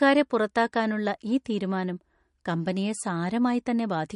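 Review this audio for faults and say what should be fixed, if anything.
Throughout the speech, the sound is watery and swirly, and nothing is heard above 10.6 kHz, so the top of the treble is simply missing. The likely cause is MP3 compression at a low bitrate. The damage is plainly audible and fits a rate of about 44 kbps. With so few bits, the encoder cuts the high band at a fixed point and drops quieter frequency components that flicker in and out between frames. To prevent this, keep the recording uncompressed or encode at a much higher bitrate.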